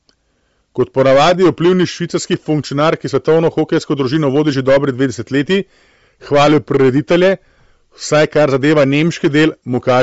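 Hard clipping runs through the whole recording. The speech drives a stage about 13 dB past its limit, so the peaks are sliced flat. Roughly 7 percent of samples hit that ceiling. Every loud syllable carries a harsh, buzzy fuzz.

The sound is also band-limited for its full length. Nothing remains above 7.7 kHz. The top end sounds breathy and grainy, and the damage is plainly audible. This likely comes from Bluetooth LC3 compression, consistent with 10 ms frames at a low bitrate near 32 kbps.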